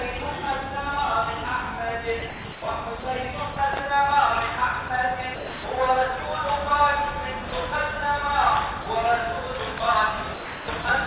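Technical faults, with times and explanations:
2.20 to 3.56 s, 4.88 to 5.64 s and 10.34 to 10.84 s: sound chopped by the voice detector. In each stretch the sound cuts in and out. About 0.32, 0.30 and 0.36 s are swapped for comfort noise. The likely cause is a sender's detector flipping between sending and muting. The sound is all held below 4 kHz by the call codec.
7.50 to 7.52 s, 8.82 to 8.86 s and 9.78 to 9.80 s: sound dropped by the voice detector. Brief slivers of sound, 20, 40 and 20 ms, vanish into steady comfort noise. The detector likely mistook quiet sound for background and stopped sending until it triggered again.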